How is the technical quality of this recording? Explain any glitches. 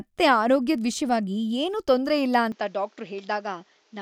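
The recording has one clear problem: a change in input partway through. At 2.52 s, right after "ವಿಷ್ಯವಾಗಿ ಏನೂ ತೊಂದ್ರೆಯಿಲ್ಲ", it sounds like the input switched to a poorer device. Everything above 7.6 kHz disappears, the level drops by around 5 dB, and a faint new noise floor appears, roughly 35 dB down. There's no gap at the switch. The likely cause is the system swapping microphones mid-recording.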